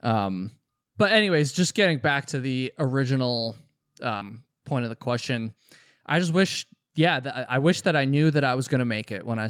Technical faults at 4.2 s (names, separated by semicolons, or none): short concealed packet loss; lost packet rebuilt from error correction